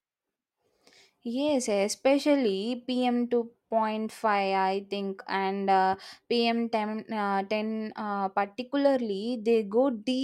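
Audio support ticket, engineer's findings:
No faults found on listening.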